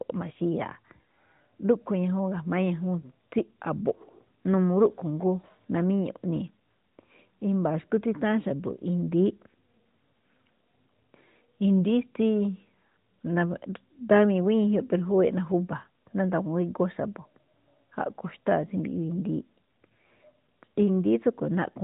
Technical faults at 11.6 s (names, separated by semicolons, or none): none